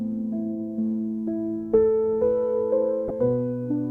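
Right near the end, from 3.08 to 3.10 s, there's a corrupt frame decoded into the audio: a short, fairly loud glitch that peaks somewhere around -15 dBFS. What's happening is that bits inside the compressed stream got flipped, and the decoder played the damaged data anyway, so misread gains and codes threw energy into the wrong frequencies. It's over in about 24 ms, which lines up with a few consecutive frames being hit.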